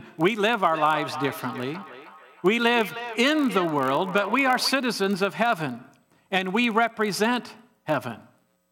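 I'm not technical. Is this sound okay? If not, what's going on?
No. There are two problems.

The first is a block size mismatch, with the gaps padded. It runs through the whole clip. One part of the system hands over chunks of sound that are too short for the next part, which seems to read chunks of 1024 samples. The missing bit of each chunk is filled with silence. Those tiny silences repeat about 43 times a second, and that is the low buzz under the speech. The speed hardly changes. It plays only a touch slow, at normal pitch.

The second is a feedback echo between two devices, from 0.72 to 4.82 seconds. Two devices in the same room seem to be on one call. One plays the sound the other's microphone picked up, and that microphone hears it again. Each device only cancels its own playback, so this echo gets through. The speech comes back roughly 0.3 seconds later, quieter than the original and thin and ringing.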